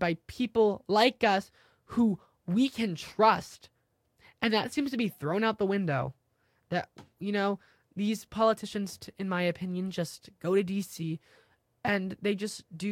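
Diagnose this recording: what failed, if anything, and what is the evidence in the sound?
The failure is in the codec stage: compressed frames skipped. At 11.02 s, right after "opinion just go to", the speech jumps ahead by about 20 ms, which fits a single lost frame.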